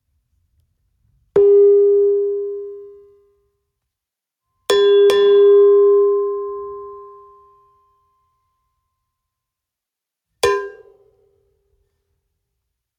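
The level pumps from start to finish, with a swing of around 10 dB. Loud and soft moments sit unnaturally close together and the whole recording sounds squashed. This is gain pumping, likely from input gain set far too high for the microphone, with a fast limiter or compressor clamping down on each peak and releasing in the pauses.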